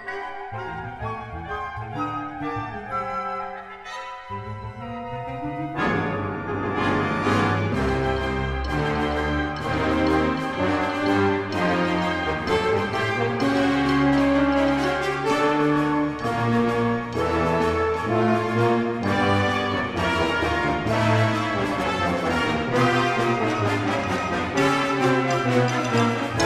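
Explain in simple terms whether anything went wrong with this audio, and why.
Nothing went wrong here; no faults can be heard.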